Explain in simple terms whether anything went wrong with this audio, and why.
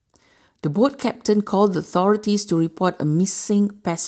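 Nothing went wrong with this speech recording.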